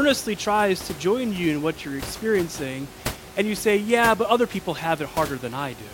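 No technical faults are audible.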